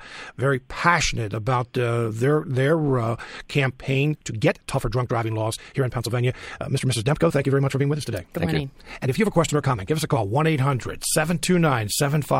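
A time-stretched section runs from 3.97 s to 10.23 s of this speech clip, where the pace suddenly jumps to about 1.5 times normal speed while the pitch stays where it was. The result sounds rushed. This is likely software fitting the passage into a shorter duration, preserving pitch by discarding short slices of the waveform and joining what remains.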